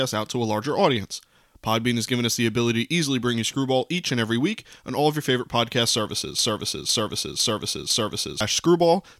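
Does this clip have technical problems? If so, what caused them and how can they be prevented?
Yes. A broken-record loop runs from 6.39 to 8.41 s: one 505 ms speech fragment repeats four times, likely from a stalled stream, and appears as identical back-to-back blocks on the waveform and spectrogram. Prevent it with deeper buffering and a stall watchdog that outputs silence instead of replaying stale audio.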